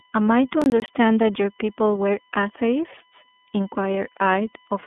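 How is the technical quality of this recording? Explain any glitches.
The recording has three technical problems: a steady electrical whine, plainly audible narrowband codec damage, and a short burst of crackle near the start.

A USB whine runs through the whole clip. Current drawn by the USB bus in regular 1 ms frames is leaking into the audio path through the power supply or ground. The result is a fixed 1 kHz tone that sits about 40 dB below the speech.

iLBC codec damage is also present throughout. The speech has passed through a narrowband VoIP codec that encodes each 30 ms block independently, and the bitrate sounds like iLBC's 13.33 kbps mode. The line band runs from roughly 250 Hz to 3.5 kHz, with nothing above 3.8 kHz, so the speech sounds thin and muffled. The damage is plainly audible as a rough, slightly synthetic texture.

Processor overload crackle appears from 0.62 to 0.88 s. 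The processor could not finish its audio buffers on time and missed several deadlines in a row. The gaps fit buffers of around 20 ms, and each one was filled with silence. These hard-edged dropouts, a handful of them in quick succession, merge into a short burst of gritty, tearing crackle that stops once the load passes.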